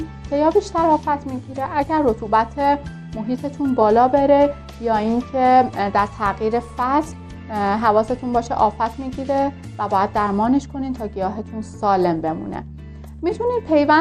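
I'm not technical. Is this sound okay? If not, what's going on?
No. The whole clip sounds dull and has a gurgling, grainy roughness. That is likely MP2 compression squeezed too hard. The encoder switches off the upper frequency bands to save space. The bands that remain are rendered coarsely, so the sound bubbles and smears.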